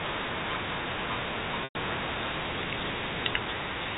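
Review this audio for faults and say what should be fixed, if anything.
At 1.64 to 1.75 s the speech briefly holds a buzzy, repeated tone that fades toward silence before the sound returns. This is packet loss with pitch repetition: about 110 ms of audio went missing, which fits a run of roughly eleven 10 ms packets, and the receiver looped the last pitch period and faded it out to bridge the gap. Forward error correction or redundant packets on the link would prevent it.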